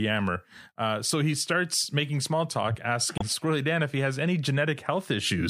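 Damaged data in a compressed stream occurs from 3.15 to 3.22 s, a break of roughly 70 ms in the speech. Some of the encoded bytes at that point are wrong, so the decoder cannot read those frames correctly. It loses sync and has to hunt for the next valid frame header before normal decoding resumes. The misread data and the search come out as a chirp, squawk, click or short hole that cuts across the speech.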